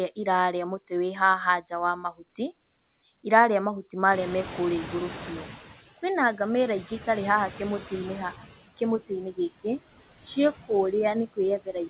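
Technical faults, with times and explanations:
throughout: noise suppressor artifacts. The suppressor lowers steady-noise bands by about 17 dB frame by frame, so background noise sinks between words and rises under them.
4.11–5.78 s: noise suppressor catching up. Room noise jumps about 23 dB, and the lagging noise estimate lets it through cut only about 10 dB, then sinks over 1.67 s.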